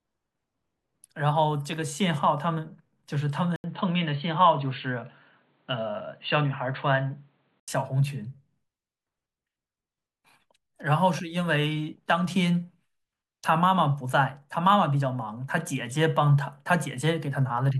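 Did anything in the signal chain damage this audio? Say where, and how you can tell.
Yes. From 3.56 to 7.68 s the speech turns dull and boxy, with nothing above 4.5 kHz and a different, faint noise floor about 45 dB down, after an 80 ms gap. Level barely changes. The likely cause is an input switched to a poorer device at the driver stage.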